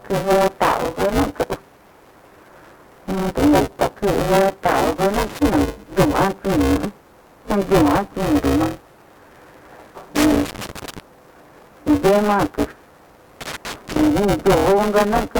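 A robotic buzz at 200 Hz runs through the whole recording, and it is present only while there is signal. This is buffer tearing. The writing side and the reading side of the ring buffer have slipped and now cross inside every period. That points to a period of about 5 ms. In each period, roughly a third of the audio is stale, from about 10 ms earlier. Hard joins on both sides of that stale section produce the rattle. Three irregular bursts of scratchy crackle also break through, at 5.14 to 5.38 s, 10.16 to 10.99 s, and 13.41 to 14.07 s. This is loose connector crackle. A worn or dirty contact is making and breaking rapidly as it moves. Each break chops the signal, and any DC on the line adds pops. The bursts vary in length, from about a quarter second to nearly a second.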